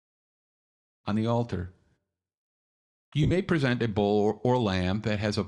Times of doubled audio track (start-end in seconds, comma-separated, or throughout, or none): none